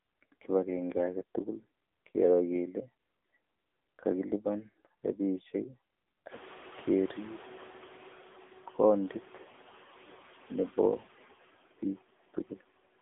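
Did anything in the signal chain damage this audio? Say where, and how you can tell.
Yes, at the codec stage: the AMR narrowband mobile codec runs throughout. The sound sits in a 250 Hz to 3.6 kHz band with nothing above 3.8 kHz. The speech is heavily buzzy and synthetic, which fits a low mode near 6.7 kbps. A simple telephone filter would limit the band without that coding texture. The room noise that rises about halfway through also takes on a swirling warble.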